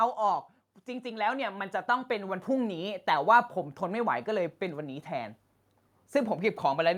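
Speech, with automatic gain rising from 0.86 to 3.07 s: the AGC judged the input too quiet and crept up about 8 dB, lifting voice and background together.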